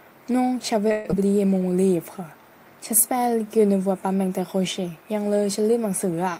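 At 0.91 s the sound cuts out and the gap gets papered over: for about 207 ms the receiver stretches the last bit of audio into a buzzy, fading tail, with no true silence. About 60 ms is simply gone when things resume at 1.15 s. That's likely a long network dropout, and the delay seems to shift by around a tenth of a second.

Then from 1.59 to 1.87 s there's a jitter buffer slow-down. The receiver is rebuilding its cushion by repeating tiny pitch-period chunks, adding about 44 ms. Playback runs at roughly 87% speed with the pitch unchanged, so that stretch sounds drawn out.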